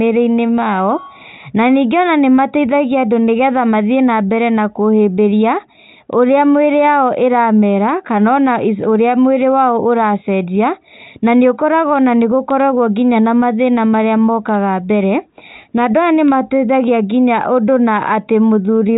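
No technical faults are audible.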